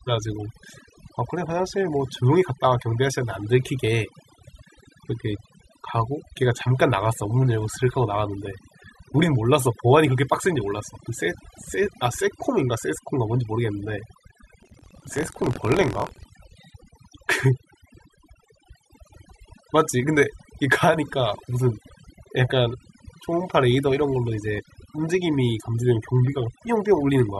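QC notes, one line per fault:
throughout, overdone noise removal: background drops and breaks up into twinkly specks, and quiet parts of the speech go with it as bands get clamped.
14.58–16.27 s, buffer tearing: robotic 43.1 Hz buzz under the speech, which fits a 1024-sample buffer. A small slice of each period replays audio from about 50 ms earlier.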